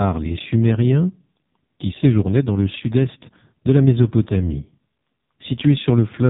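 Throughout, the speech carries AMR narrowband mobile codec damage. Nothing passes above 3.8 kHz. The heavy buzzy, synthetic tone fits AMR-NB's lowest 4.75 kbps mode.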